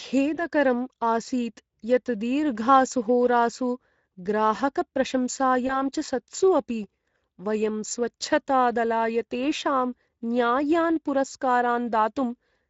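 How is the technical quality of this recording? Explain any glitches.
The technical quality is limited. The Speex codec colours the whole recording, and there are two brief dropouts.

Speex codec damage runs throughout. The speech sounds hoarse and grainy, with a noisy edge. Speex is a CELP codec that models the voice with a filter and a coded excitation. Here the excitation gets too few bits, and the damage is plainly audible. The sound points to a rate of roughly 17 kbps. The top of the band is thin and noise-like rather than crisp.

VoIP packet loss concealed by the speech codec occurs twice, from 0.35 to 0.39 s and from 5.67 to 5.82 s. Each fits one lost packet of about 20 ms. The decoder fills the gap by repeating its last pitch and filter with falling gain. That produces a short buzzy or noisy smear. Each frame builds on the one before, so the voice stays weak or distorted after packets return. 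That is why the second event lasts about 150 ms.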